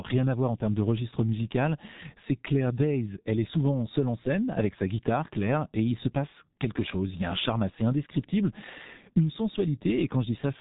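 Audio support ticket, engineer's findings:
G.723.1 codec damage, entire clip: speech muffled and hoarse, consonants smeared. Spectrogram shows a hard ceiling at 3.8 kHz, blank above; coarse, blocky formant bands from slow 30 ms frame updates. Heavy loss points to roughly 6 kbit/s coding.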